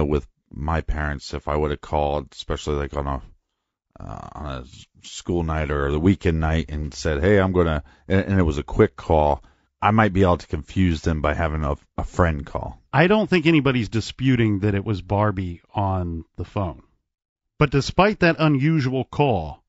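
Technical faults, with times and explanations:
Throughout, low-delay AAC compression: rough, grainy speech with noise between harmonics, likely AAC-ELD near 32 kbps, whose short frames resolve pitch poorly, unlike standard AAC.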